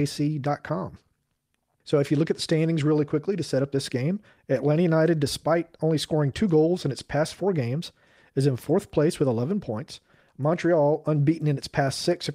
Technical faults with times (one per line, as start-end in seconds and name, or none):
none